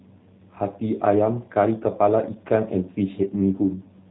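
From start to finish the speech carries G.729 codec damage, plainly audible. Everything above about 3.9 kHz is missing, yet unlike a simple low-pass filter the remaining band is also rebuilt: a vocal tract model, pitch predictor and a few pulses per frame resynthesise each 10 ms slice, giving a rough, slightly buzzy, synthetic texture that fits an 8 kbit/s stream. Music-codec smearing or swirly pre-echo would sound different.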